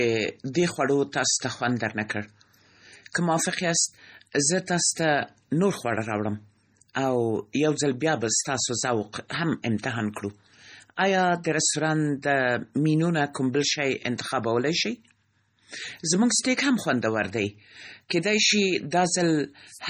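From start to finish the speech carries heavy damage that sounds like MP3 compression, with the likely cause being a very lean encode, around what you'd expect from 32 kbps. Starved of bits, the encoder drops the weaker frequency lines and lets them flicker on and off between frames, so the voice comes across watery and swirly, with smeared attacks. Nothing at all survives above about 19.7 kHz, where the treble has been cut off flat.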